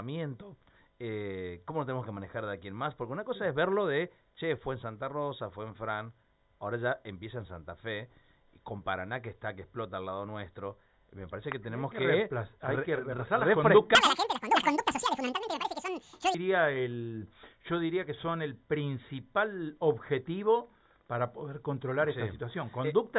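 From 13.95 to 16.34 s there's a wrong sample rate fault: everything runs twice as fast and an octave high, which fits 8 kHz material played at 16 kHz.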